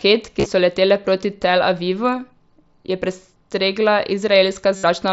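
Concealed Bluetooth headset packet loss occurs twice. From 0.39 to 0.46 s, about 45 ms of packets go missing in scattered gaps, the longest about 30 ms. The receiver fills each gap by repeating the closest-matching recent stretch of waveform, leaving a brief buzzy hold. From 4.76 to 4.84 s, a denser loss of about 70 ms produces a longer steady buzz at full level, then a slight warble as real speech resumes over the mSBC link.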